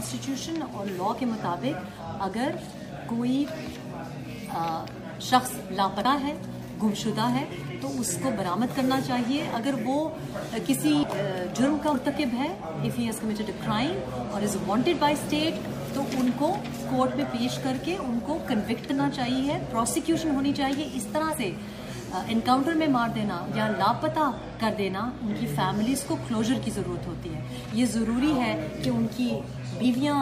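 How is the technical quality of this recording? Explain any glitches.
The recording has five glitches, all compressed frames skipped, at 6.04 s, 11.03 s, 11.94 s, 18.88 to 18.92 s and 21.30 to 21.34 s. At each point whole frames went missing or were rejected by the decoder as damaged, so the sound jumps forward by roughly 70, 150, 100, 70 and 50 ms respectively.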